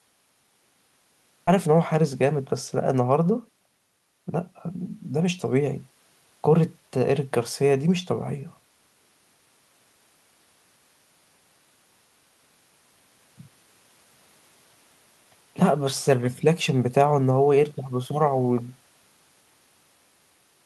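At 1.47 s the speech jumps forward abruptly, with no pause or fill at the join. Roughly four tenths of a second of speech is simply gone, and the sounds on either side butt straight against each other. This is a skip ahead. A chunk of audio was discarded, lost in transit or thrown out by an overflowing jitter buffer while newer audio was already queued, so playback resumed further on and the call delay shrank by about the same amount.

From 2.22 s to 2.94 s the speech runs at about 104% of normal speed while the pitch stays put. This is a jitter buffer speed-up. The buffer was holding more audio than its target, so the receiver repeatedly snipped out short pieces one or a few pitch periods long. Across this stretch those cuts add up to roughly 40 ms, pulling the delay back down. Throughout, the audio carries the band limit of the Opus call path, with nothing above about 12 kHz.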